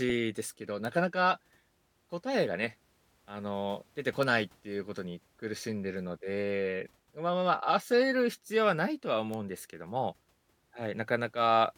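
At 0.85 s, 4.23 s and 9.34 s there's a single sharp tick, a bit error spike, each peaking around -20 dBFS. A flipped bit throws one or two samples off by a power of two before snapping back, so you get a broadband click unrelated to the speech.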